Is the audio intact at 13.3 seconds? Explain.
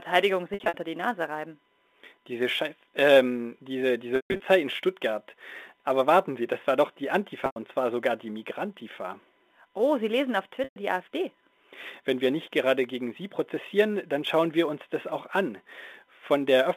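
No: sample clock jitter runs throughout, including 13.3 s. The unsteady sampling clock, wobbling by a few microseconds, adds a hiss roughly 30 dB down that swells on loud, bright speech.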